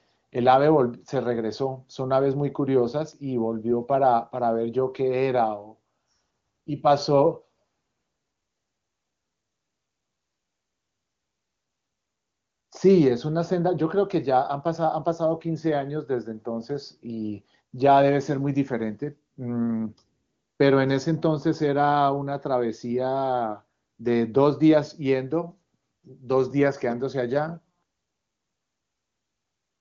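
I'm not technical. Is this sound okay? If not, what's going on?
Yes, it sounds fine, and nothing stood out as a problem on listening.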